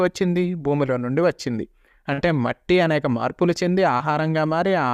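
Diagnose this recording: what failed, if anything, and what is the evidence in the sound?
Network: short concealed packet loss at 2.13–2.20 s and 3.98 s. The decoder extrapolated missing audio, leaving smeared, repeated spectrogram texture and blended waveform seams.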